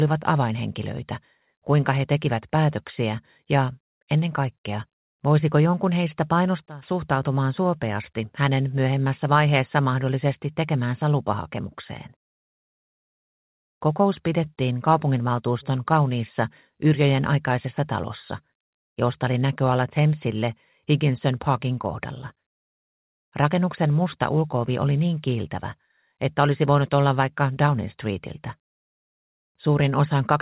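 Loudspeaker feedback squeal, twice: a microphone hears its own loudspeaker, and the loop gain passes one at 5.4 kHz. From 6.34 to 7.17 s and 17.13 to 18.65 s, a pure whistle swells within about half a second to about 5 dB above the sound.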